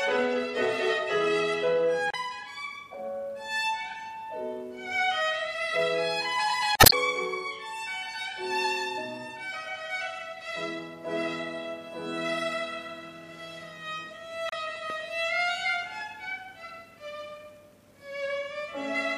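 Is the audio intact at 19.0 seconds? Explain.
Yes, the audio is intact at 19.0 seconds, with nothing there to disturb the sound.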